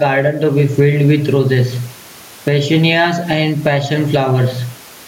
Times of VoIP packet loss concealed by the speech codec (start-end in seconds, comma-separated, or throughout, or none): none